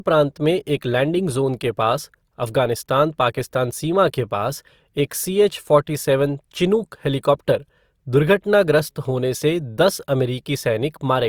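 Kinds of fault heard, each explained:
Low-bitrate audio saved at a high bitrate: the speech keeps the coding artefacts of a likely earlier low-bitrate encode, now re-saved as high-bitrate MP3; the spectrogram reaches 20.2 kHz.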